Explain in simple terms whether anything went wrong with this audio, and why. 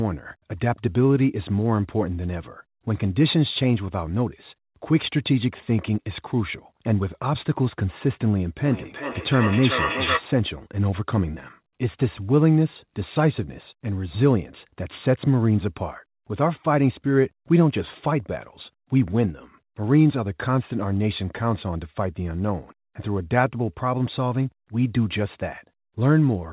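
Feedback echo between two devices, 8.65 to 10.28 s: one device's speaker leaks into another's microphone, so the speech returns about every 0.4 seconds, nearly as loud as the original.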